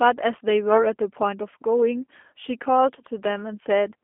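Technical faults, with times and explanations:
Throughout, G.729 codec: speech rebuilt at about 8 kbit/s from a filter, pitch predictor and sparse pulses, so it sounds rough and synthetic, band-limited near 250 Hz to 3.4 kHz, nothing above 3.5 kHz.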